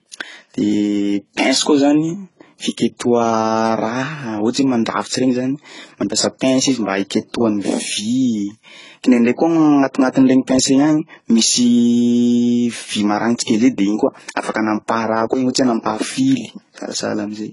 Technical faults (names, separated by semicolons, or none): transcoding between lossy codecs